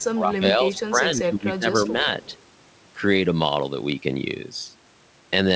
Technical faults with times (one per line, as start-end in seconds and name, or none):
0.00-0.05 echo leak
0.14-2.07 speech suppressed in double talk
0.75-0.88 echo leak
2.22-2.37 echo leak